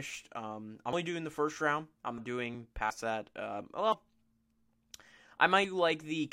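At 0.93, 2.18, 2.90, 3.92 and 5.64 s the speech jumps abruptly, skipping roughly 100, 150, 50, 50 and 150 ms respectively. This is likely a dropped buffer (overrun): unread samples were overwritten, so the surrounding audio splices directly together.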